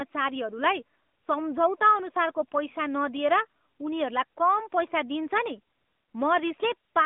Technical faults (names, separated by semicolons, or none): AMR narrowband mobile codec